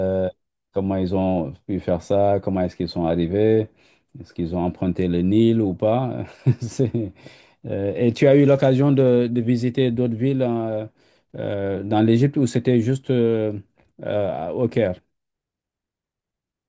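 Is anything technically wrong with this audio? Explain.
No, nothing is technically wrong with this audio.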